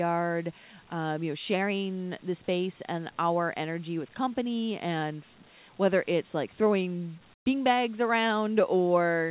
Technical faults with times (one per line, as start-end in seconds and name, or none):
7.34-7.46 comfort noise in place of the background